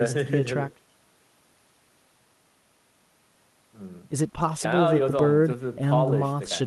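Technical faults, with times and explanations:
No technical faults can be heard anywhere in the speech recording; the signal stays steady and intact throughout.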